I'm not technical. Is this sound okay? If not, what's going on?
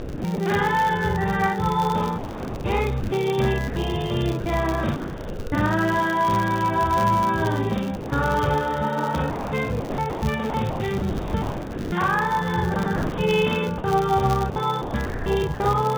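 No. The whole clip has a channel delay (doubling): one channel arrives about 46 ms late, so everything sounds doubled, like a quick slap echo.

There is also a filter restarted on every block. Each restart leaves a tiny click, and they run together into a steady 100 Hz buzz that follows the loudness.

The sound is choppy from 0 to 0.38 s, 2.18 to 5.52 s, 9.3 to 11.92 s and 12.74 to 15.6 s. This is likely sound chopped by the voice detector: parts of the sound were replaced by filler noise.

From 7.96 to 8.12 s the sound briefly gives way to steady noise. This is likely sound dropped by the voice detector.

The phone-style line itself cuts off everything above 4 kHz, giving the familiar narrow telephone tone.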